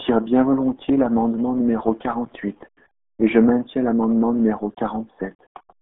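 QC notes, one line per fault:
throughout, RealAudio 14.4 codec: speech is confined to roughly 200 Hz to 3.5 kHz with nothing above 3.7 kHz, and heavy gargly, muffled smearing points to a very low bitrate dial-up codec near 8 kbit/s. Unlike a plain telephone band limit, the sound itself is mangled.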